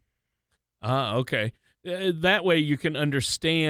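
No technical faults can be heard anywhere in the speech, so there is nothing to describe in time order.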